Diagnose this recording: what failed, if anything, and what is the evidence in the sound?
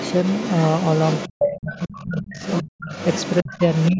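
A second voice from the far end of the call runs under the talker almost the whole way through, from 0.00 to 3.92 s, sitting roughly 10 dB below the main speech. This is the other side's voice leaking through, a call-processing fault. The far end is most likely being played on the talker's loudspeaker and picked up again by the microphone, with the echo canceller not removing all of it.

The talker's own level collapses in three places: 1.29 to 2.36 s, with roughly 0.7 s affected and the deepest dip around 35 dB; 3.42 to 3.61 s, dipping around 25 dB; and 3.90 s to the end, dipping around 15 dB. These match speech suppressed in double talk, again at the call-processing stage. With both sides active, the echo canceller could not tell near speech from echo and attenuated both. The band stops at 8 kHz, consistent with the call path.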